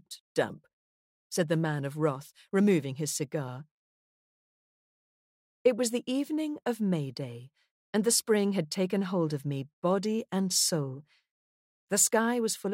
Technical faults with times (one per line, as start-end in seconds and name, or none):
none